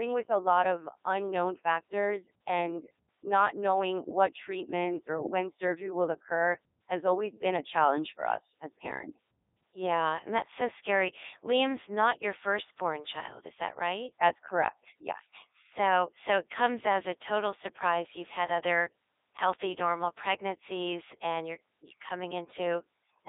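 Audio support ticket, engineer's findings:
Codec 2 vocoder, full clip. Buzzy, robotic speech resynthesised from pitch, voicing and envelope; waveform not preserved. 300 Hz to 3.7 kHz, nothing above 3.8 kHz; fits 3.2 kbit/s mode. Plain band-limiting keeps natural timbre; this doesn't.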